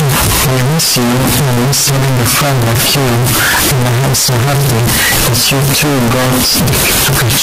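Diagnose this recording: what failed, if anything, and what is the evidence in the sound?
The fault sits at the sample-format conversion stage, and it runs through the whole clip: the speech is buried under loud, harsh, buzzing distortion, and the pauses between phrases are as loud as the speech itself. This points to signed and unsigned mixed up, likely with 16-bit samples. Flipping the top bit turns every zero crossing into a full-scale jump. On a waveform the trace swings hard between its extremes with no quiet gaps; a spectrogram shows dense broadband energy from top to bottom.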